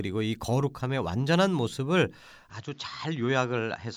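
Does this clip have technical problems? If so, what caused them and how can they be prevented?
Yes. From 2.5 s to the end, the speech turns duller and a few decibels quieter, with nothing above 7.3 kHz and a new noise floor far below the speech, likely from the input switching to a poorer device mid-recording. The switch leaves no gap. Locking the input to one microphone and turning off automatic device switching prevents it.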